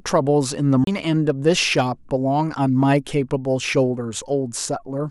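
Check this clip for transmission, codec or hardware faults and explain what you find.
One fault is present, a CD skip, lasting from 0.84 to 0.87 s in the speech. A knock or a flaw on the disc threw the laser onto a different turn of the spiral track, so the player muted for about 30 ms and resumed from another point. The speech jumps abruptly, with a tick at the break. A waveform shows a short flat gap with a mismatched join, and a spectrogram shows a thin vertical break where the harmonic lines don't continue.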